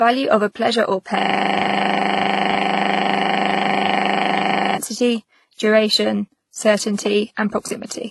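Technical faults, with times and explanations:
throughout: transcoding between lossy codecs. Nothing is present above 11.8 kHz, and two distinct kinds of coding smear are heard together. This points to a low-rate HE-AAC stage followed by WMA 1 at 64 kbit/s, likely a transcoding chain, since a single codec would leave only one kind of artefact.
1.19 to 4.78 s: system hang loop. The same 40 ms fragment repeats exactly, about 90 times, producing a steady buzz at 25 Hz in place of speech. The system froze while the sound hardware kept replaying one buffer. The repetitions are sample-identical, unlike concealment, which varies them.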